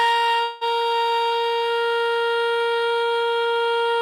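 From 0.43 to 0.64 s the music stops moving forward: the last sound is stretched into a buzzy, fading continuation for about 175 ms, with no fall to true silence, and then playback resumes about 180 ms further on in the music. This is most likely a long network dropout concealed by the receiver. Unlike a brief packet-loss glitch, the smeared stretch lasts a noticeable fraction of a second, and material is skipped rather than delayed.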